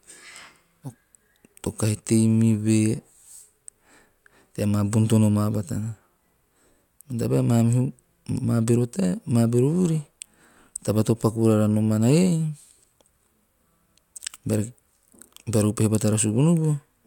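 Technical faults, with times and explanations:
No technical faults detected anywhere in the speech recording.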